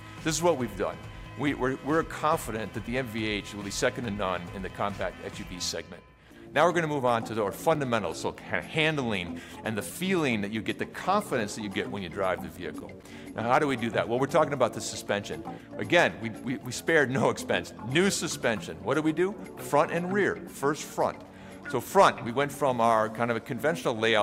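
The audio has two bursts of CD scratch ticks, first from 6.62 to 8.2 s and again from 11.9 to 13.7 s. Each burst is a regular run of tiny clicks, about five a second, and the longest run only a few milliseconds in the first burst and around 10 ms in the second. That steady spacing points to a scratch passing the laser once per disc revolution, with the player patching or muting samples its error correction couldn't rebuild.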